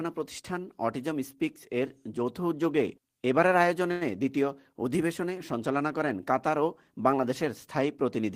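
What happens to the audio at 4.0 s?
At about 4.0 s there is a short stall from a late packet, from 3.91 to 4.03 s. A packet arrived late and the jitter buffer ran empty, so the receiver stretched the last sound for about 97 ms, then resumed from the same point. Nothing is lost, but playback runs 97 ms later from there on.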